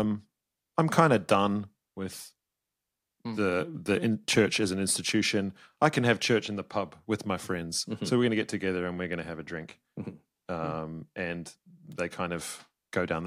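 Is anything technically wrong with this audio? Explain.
Yes. There is a loose connector crackle near the end of this speech clip, from 11.92 to 11.98 s. A worn or dirty contact in the signal chain was intermittently making and breaking as it shifted. Each break chopped the signal, and any DC present on the line turned the reconnections into pops. The result is a brief, irregular burst of scratchy crackle, about 70 ms long.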